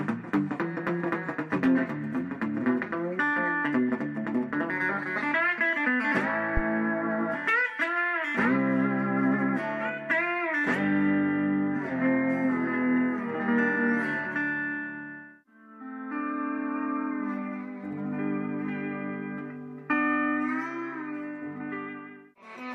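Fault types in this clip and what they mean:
Phantom power thump: a deep thump at 6.57 s that dies away in about 11 ms, peaking near -13 dBFS. It is the step from a supply being switched on a live input, passed through the coupling capacitors.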